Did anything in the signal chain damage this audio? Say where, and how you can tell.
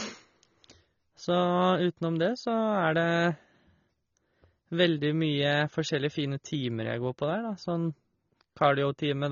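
Yes, and it's the codec stage. All the way through this speech, nothing sits above about 7 kHz, and what's left has that dull, smeared quality with a fizzy, warbly edge on sibilants. That's classic AAC compression damage, likely an AAC-LC encode starved for bits; the sound fits something around 24 kbps. At that rate the encoder pulls the cut-off down and quantises the remaining bands so coarsely that holes and swirly artefacts creep in.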